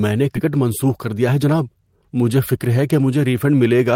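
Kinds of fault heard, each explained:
Skip ahead: Around 0.35 to 0.37 s the speech jumps forward with no fill at all. Something like 0.7 s of audio was discarded, either lost in transit or dropped by the jitter buffer as it overflowed while newer audio was already queued. The sides of the cut are butted together almost directly, so the missing material simply vanishes. The result is an abrupt discontinuity rather than a silence, and the playback delay falls by roughly the same amount.
Jitter buffer speed-up: From about 0.45 s to 1.51 s the speech plays at 108% of normal rate with unchanged pitch. The buffer was holding more audio than its target depth, so the receiver trimmed short pitch-period-sized segments repeatedly to shed the excess, removing around a tenth of a second in total. It follows directly after the skip ahead, and this stretch sounds noticeably hurried, with syllables compressed while the voice's pitch stays where it was.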